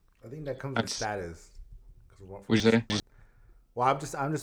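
Around 2.6 to 3.0 s the speech has chunks out of order: one 100 ms chunk turns up three chunks late, after the ones meant to follow it. Nothing's missing, but that stretch comes out jumbled, with three hard joins.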